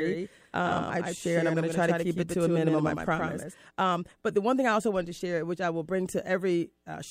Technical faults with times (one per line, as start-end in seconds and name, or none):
0.00-3.54 doubled audio track